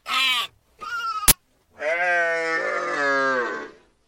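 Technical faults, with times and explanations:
1.28 to 1.32 s, uninitialised buffer: a 40 ms block went out to playback before any audio had been written into it, so whatever stale values were sitting in memory got played as samples. That's the short, loud burst of digital noise cutting into the sound there.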